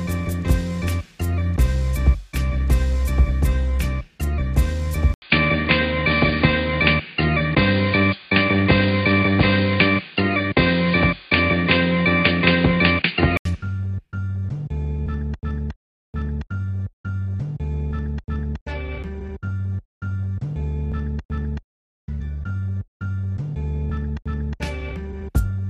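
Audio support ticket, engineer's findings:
Input likely switched to a poorer device, 5.14 to 13.45 s: 80 ms gap at the switch, then dull, boxy sound, nothing above 4.8 kHz, faint new noise, level unchanged.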